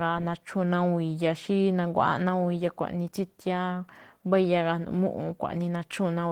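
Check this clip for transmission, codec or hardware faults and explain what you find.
One codec fault is present. Opus voice compression, throughout: the hybrid encoder, at a rate fitting about 16 kbps, codes the excitation coarsely, leaving the speech plainly hoarse and slightly robotic.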